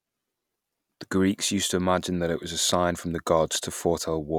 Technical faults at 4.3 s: none

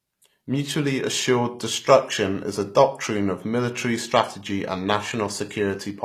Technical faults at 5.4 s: HE-AAC compression

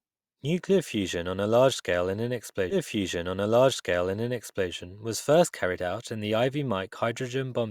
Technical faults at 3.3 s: stream segment repeated

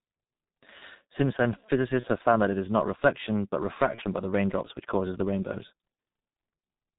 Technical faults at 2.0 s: G.723.1 codec; VoIP packet loss concealed by the speech codec

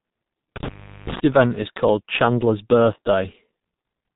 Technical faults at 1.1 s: G.723.1 codec; intermittent contact

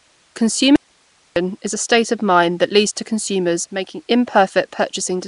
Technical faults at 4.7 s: Nellymoser compression

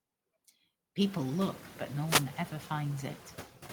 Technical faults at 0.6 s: noise suppressor artifacts

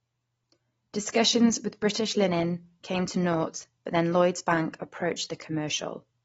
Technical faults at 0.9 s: AAC compression

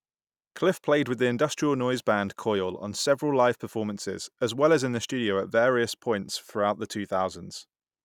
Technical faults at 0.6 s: none

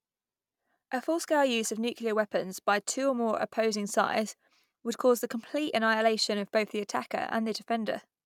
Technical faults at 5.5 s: none

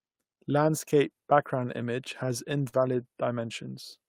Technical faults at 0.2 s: none

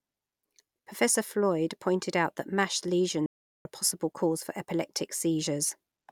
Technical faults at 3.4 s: playback stall

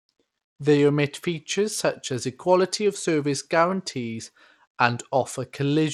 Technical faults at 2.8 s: Bluetooth SBC compression

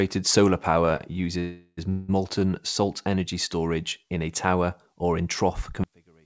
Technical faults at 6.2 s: one channel inverted

